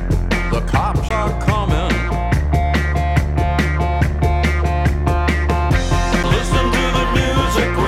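A CD skip at 1.09 s and another at 6.23 s: the laser jumped tracks, briefly muting (roughly 20 ms, then under 10 ms) and ticking before the sound resumed elsewhere.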